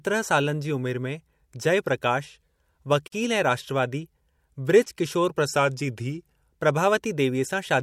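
At 3.08 s the speech cuts out for about 44 ms and resumes exactly where it stopped, ending at 3.12 s. The codec smears the edges of the hole. This is a gap at a join of encoded pieces, consistent with sections about 6 s long encoded separately and spliced without trimming. The encoder's start-up delay and the padding in the final frame of the earlier piece both stay in the stream as a short stretch of silence.

From 5.56 s to 6.51 s the speech slows by about 6% and its pitch drops by about 105 cents, roughly a semitone, so the voice sounds briefly detuned and dragged. This is likely a drift correction step, in which clock-matching software changes the playback rate in one jump to refill or drain its buffer rather than easing the rate gradually.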